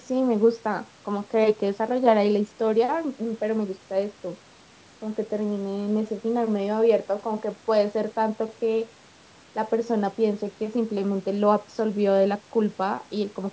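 No technical faults can be heard in this speech. The sound stops at about 8 kHz, which fits wideband call processing through a G.722 codec.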